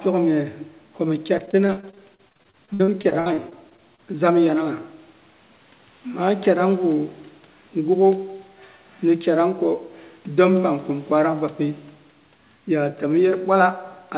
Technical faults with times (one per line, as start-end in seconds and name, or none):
1.38-4.00 repeated packet loss (robotic sound)